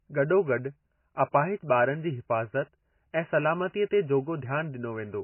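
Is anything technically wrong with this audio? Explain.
Yes. Throughout the speech the sound is dull and muffled, with watery, swirling artefacts smearing the consonants. This is likely low-bitrate audio saved at a high bitrate: a starved MP3 encoding, consistent with roughly 16 kbit/s, re-encoded as MP3 around 256 kbit/s. The second pass cannot restore what the first discarded. A spectrogram would show an abrupt ceiling with empty space above it, and patchy, blotchy energy below it.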